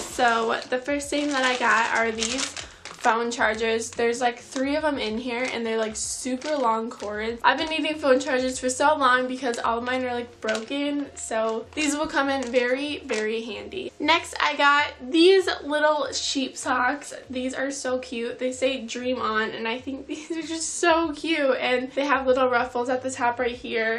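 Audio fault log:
Nothing stood out on listening to this recording.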